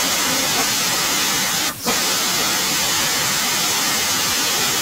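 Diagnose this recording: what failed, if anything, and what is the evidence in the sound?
Nothing stood out on listening to this speech recording; no stage in the chain gave any audible sign of having failed.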